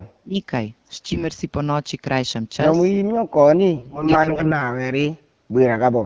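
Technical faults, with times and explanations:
0.21–0.36 s and 3.08–5.28 s, speech suppressed in double talk: The speech sinks sharply, by about 35 dB in the first brief dip and about 40 dB across the second, roughly two-second stretch. This is likely an echo canceller treating the talker as loudspeaker echo while both sides spoke and turning everything down.
0.91–1.25 s and 3.78–4.61 s, AMR bit errors: The speech keeps its rough pitch and loudness but turns hoarse, scratchy and gargly, and worse in the later, longer patch. Corrupted bits, around 7 and 15 percent, misplace the codec's excitation pulses and skew its finer pitch, gain and spectral values.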